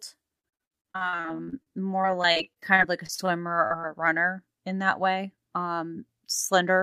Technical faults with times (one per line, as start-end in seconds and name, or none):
0.39-3.44 repeated packet loss (robotic sound)
3.68-3.85 short concealed packet loss
6.05-6.77 jitter buffer speed-up